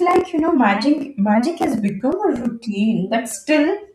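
From 1.88 s to 3.31 s the speech picks up CD scratch ticks: seven small clicks, roughly four a second, each just a few milliseconds long. A blemish on the disc defeated the error correction once per revolution, so the player patched or muted those samples.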